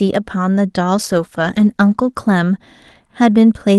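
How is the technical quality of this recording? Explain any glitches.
The recording has one noticeable glitch. A call bitrate drop runs from 0.96 to 3.13 s: the encoder was forced to spend far fewer bits, which fits a fall from 32 kbps to roughly 13 kbps, held at its lowest for about 1.1 s. Coarser coding makes the speech sound rough and watery, and it turns duller and more muffled as the upper frequencies are trimmed, before clearing once the rate recovers.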